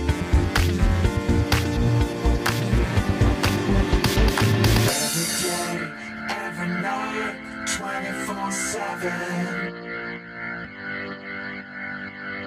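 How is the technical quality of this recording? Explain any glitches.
The technical quality of this recording is sound, with no glitches to explain.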